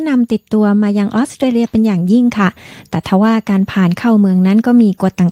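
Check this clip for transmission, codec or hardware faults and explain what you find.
Nothing wrong turns up anywhere in this recording.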